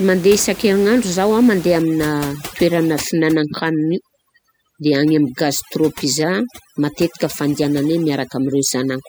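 From 1.82 s to the end, overdone noise removal sets in: a reduction stage tuned too aggressively gates frequency bands that sit near its noise estimate, so the room noise, about 18 dB below the speech, drops and breaks up into twinkling specks, while quieter speech components vanish.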